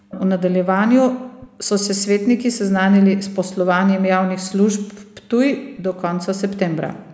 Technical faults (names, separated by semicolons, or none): echo leak